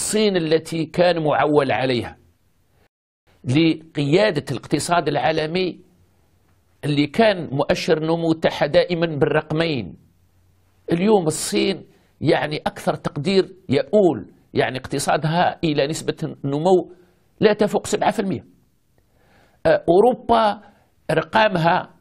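At 2.87 s the audio halts in a rebuffering stall: playback exhausted its downloaded data and waited about 0.4 s for more, adding that time. It then resumes exactly where it stopped, with nothing skipped. A waveform shows a flat gap to 3.27 s; a spectrogram shows a blank vertical band.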